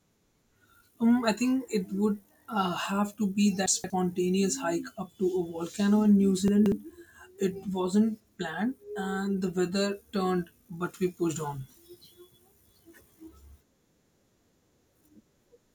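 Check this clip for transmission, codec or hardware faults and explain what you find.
Two brief scrambled moments in this speech come from chunks out of order. From 3.66 to 3.9 s, just after "to be", and again from 6.48 to 6.72 s, the sound jumbles for about a quarter second. In each, a 60 ms chunk arrived late and played three chunks after its proper place. Nothing is missing, but the shuffled sequence leaves three hard joins.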